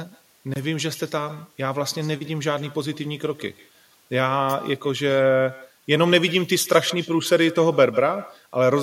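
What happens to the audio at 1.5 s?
At 1.5 s the speech is shadowed by a faint, thin copy of itself about 20 dB down, arriving roughly 150 ms late. It's echo with no canceller, present throughout: the far end's loudspeaker feeds its microphone and nothing subtracts it.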